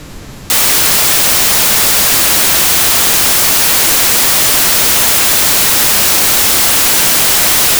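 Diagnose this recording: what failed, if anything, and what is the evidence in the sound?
At the sample-format conversion stage, samples are built from the wrong bytes from 0.5 s to the end. The speech turns into loud, harsh noise, close to white on the louder sounds. Misaligned or swapped byte order promotes the fast-changing low bits to the top of each value.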